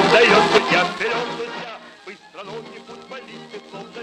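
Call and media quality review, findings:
No defects found on review; no action required.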